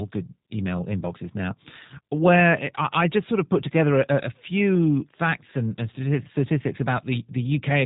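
From start to end the speech carries G.729 codec damage. It is rebuilt from a vocal tract filter, pitch predictor and sparse pulses, which fits an 8 kbit/s stream, so it sounds rough and faintly synthetic. On a spectrogram, energy stops sharply at 3.8 kHz, with blank space above.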